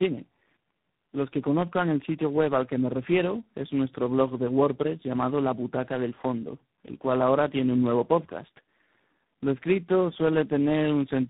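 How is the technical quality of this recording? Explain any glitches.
The speech is degraded throughout by tandem speech coding. Nothing is heard above 3.8 kHz. The sound is rough, muffled and warbly, which points to about three low-rate speech codecs coded one after another, each working on the previous coder's losses.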